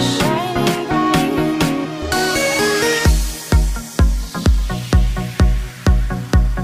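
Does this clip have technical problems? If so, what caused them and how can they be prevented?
No, the signal holds steady throughout with nothing in it that points to a recording, transmission or processing problem, so there is nothing here that needs preventing.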